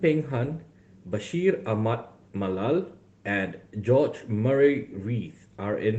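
No audible technical faults.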